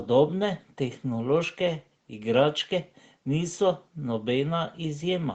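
No technical faults can be heard in this speech; its top end stops near 8 kHz, as expected from the call path it went through.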